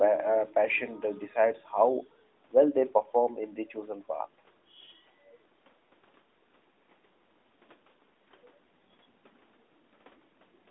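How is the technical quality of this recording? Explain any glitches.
No glitches to report: the speech carries the normal band-limiting of a narrowband mobile call, roughly 250 Hz to 3.7 kHz with nothing above 3.8 kHz, as expected for AMR-NB at 12.2 kbps.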